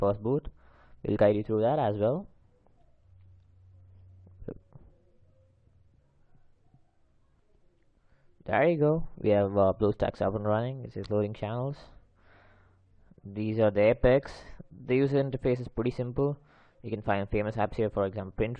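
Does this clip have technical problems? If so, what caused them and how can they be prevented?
No, there are no technical faults to report here, so nothing needs diagnosing or preventing.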